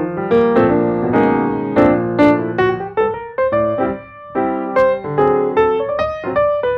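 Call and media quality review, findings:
Hard clipping: a gain stage or converter is being driven past full scale by about 1 to 3 dB, so peaks are cut flat. Flat tops throw harmonics high into the spectrum, heard as crackle and edge on loud passages: 0.33–0.60 s, 1.16–1.33 s, 1.78–2.61 s (worst, about 3 dB over), 4.78–4.83 s, 5.19–5.60 s (mildest). Probable component: input gain or a fixed-point stage before encoding.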